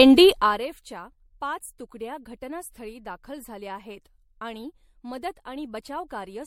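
From the start, the speech shows likely generation loss: repeated lossy re-encoding, consistent with several passes of a 64 kbit/s MP3, stacked up quantisation noise, leaving it swirly, hollow and smeared, with nothing above 16.5 kHz. From 0.30 to 0.67 s, zipper noise appears as the level drops by roughly 20 dB in unsmoothed 1 dB steps, about 40 per second, each step clicking into an audible ticking zip.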